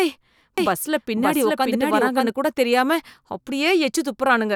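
From 0.58 s to 2.30 s the speech carries a doubled audio track: a second, full-band copy trails the original by about half a second at roughly the same loudness, so each phrase is restated over the next. The likely cause is a slower second capture path or an edit leaving two copies out of step. Unlike an echo or reverb, the copy has no decay and no room colour, and it appears and vanishes abruptly.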